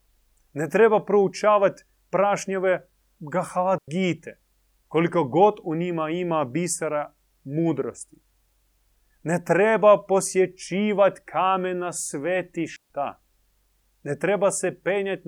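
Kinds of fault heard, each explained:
Digital wireless dropout: the receiver mutes when too much of the digital link's data goes missing, leaving clean near-silent holes in the speech, about 97 ms at 3.78 s and 141 ms at 12.76 s. On a waveform and spectrogram these show as abrupt blank gaps across all frequencies, with no noise burst at either edge.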